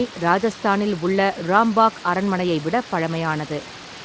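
Speech recording, with no technical faults to report.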